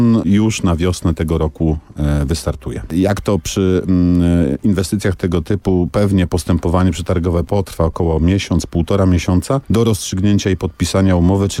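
No technical faults can be heard anywhere in the audio.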